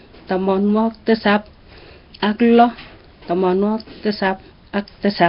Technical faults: Nellymoser compression

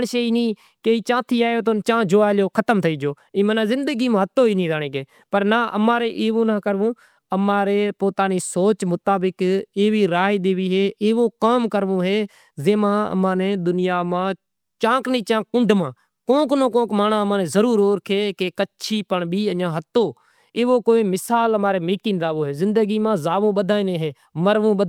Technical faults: none

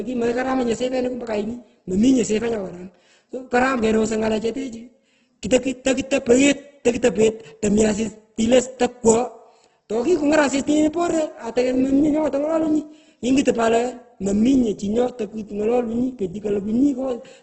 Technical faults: Opus compression

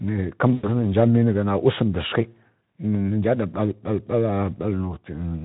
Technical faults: VoIP packet loss concealed by the speech codec

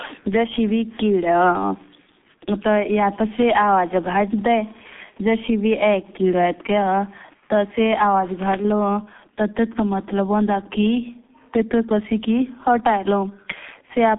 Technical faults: G.723.1 codec

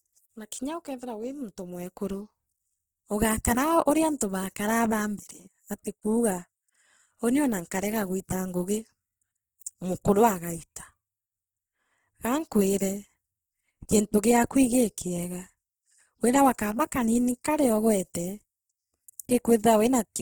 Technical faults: Opus compression

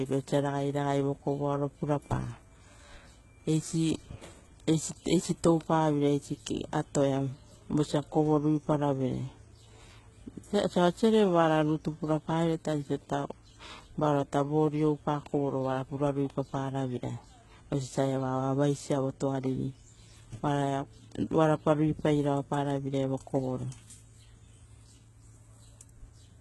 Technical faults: HE-AAC compression

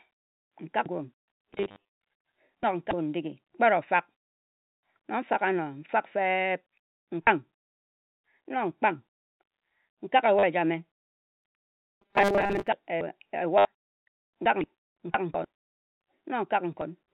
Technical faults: packet loss with last packet repeated; robotic sound from repeated short buffers

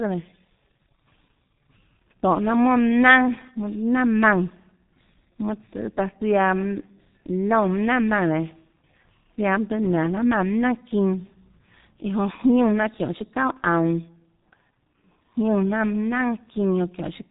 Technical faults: G.723.1 codec

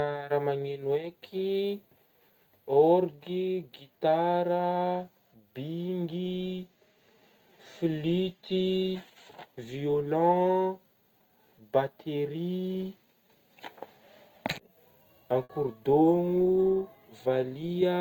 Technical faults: burst of packet loss

